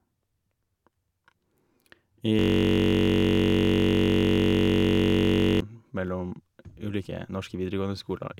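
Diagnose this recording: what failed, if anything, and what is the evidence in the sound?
System hang loop at the driver or buffer stage: from 2.39 to 5.60 s the speech becomes a steady 46.9 Hz buzz as one 21.33 ms piece, which fits a 1024-sample ring buffer, replays during the stall. The waveform shows identical repeating cycles, and the spectrogram shows frozen harmonic lines about 47 Hz apart.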